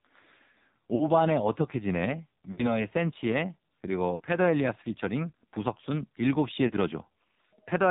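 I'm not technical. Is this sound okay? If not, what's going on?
No, not quite. The whole clip has gone through the AMR narrowband mobile codec, the old phone-network speech squeezer. It cuts everything above about 4 kHz and is working hard here, so the speech sounds muffled, buzzy and a bit robotic, like a weak cellphone line.

On top of that there are lost AMR speech frames, tiny chunks of the call that were garbled by radio errors. The phone fills each gap by stretching the last bit of sound and fading it. You'll hear brief warbles or dropouts at about 0.96–1.10 s, 2.52–2.82 s, 4.16–4.22 s and 6.68–6.72 s.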